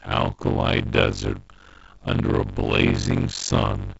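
From start to end the speech carries a block size mismatch (padded). Short written blocks are zero-filled to a longer read size, which fits 320-sample writes into 512-sample reads. The inserted gaps buzz at 46.9 Hz, and the speech runs at 0.625 speed with pitch roughly unchanged.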